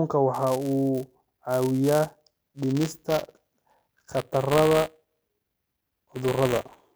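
From 0.33 s to the end at 6.95 s, the speech carries buffer tearing. The program filling the playback ring buffer and the hardware reading it have drifted, so their positions cross within every period. A small slice of each buffer, a few percent, still holds audio from one lap earlier, around 15 ms stale. Hard joins bracket that slice. The result is a steady robotic buzz at 200 Hz, which fits a 5 ms period. It rides on the speech and fades in the gaps.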